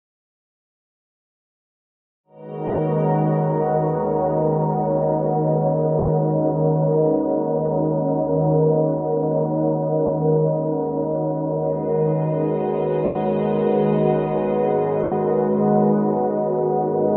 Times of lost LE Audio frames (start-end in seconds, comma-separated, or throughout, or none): 2.67-2.78, 5.99-6.08, 10.06-10.09, 13.05-13.16, 15.03-15.12